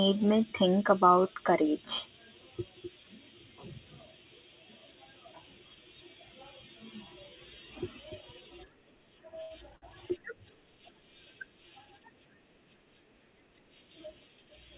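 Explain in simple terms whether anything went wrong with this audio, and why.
Two short stalls from a late packet, at 9.42 s and 9.76 s: the sound briefly hangs for about 80 ms and 60 ms, then resumes with nothing lost, unlike a dropout.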